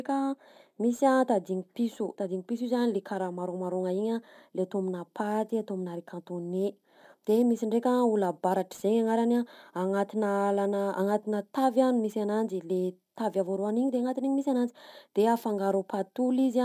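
Throughout the speech there is aliasing: the audio was resampled down without proper anti-alias filtering, consistent with a drop from 48 kHz to 32 kHz. Energy above the 16 kHz fold point reflects back as unrelated tones about 30 dB below the speech, making sibilants gritty and metallic.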